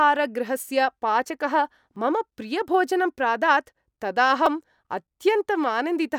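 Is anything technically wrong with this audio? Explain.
Yes. There are two repeated-buffer faults in this speech, at 1.96 s and 4.46 s. In each, fresh audio failed to reach the output in time, so the device played its last 2.67 ms block again. That fits a 128-sample buffer. At 1.96 s the block plays twice, which gives a single click. At 4.46 s it repeats four extra times, about 10 ms in total, so it sounds like a short buzz with a hard join at each repeat. Nothing seems to be lost, because the repeats delay the audio rather than replace it.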